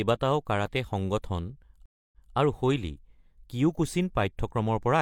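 At 1.86 s, after "কাৰাটে সংগঠন", a stream reconnect occurs: the connection dropped and a new decoder started mid-stream. About 271 ms of silence follows, then the speech resumes roughly 213 ms earlier, repeating a short stretch before "আৰু শৈলী" by 2.34 s.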